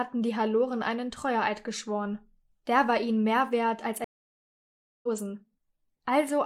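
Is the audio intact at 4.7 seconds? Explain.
No. At 4.7 seconds the clip sits inside a stream reconnect gap running from 4.04 to 5.08 s. The connection dropped, the player fell silent for about 0.99 s, then reconnected and restarted its decoder mid-stream, picking up roughly a second further on, so that stretch of material is simply missing. On a waveform this shows as a flat line, and on a spectrogram as a blank vertical band, followed by a hard jump in content where playback resumes.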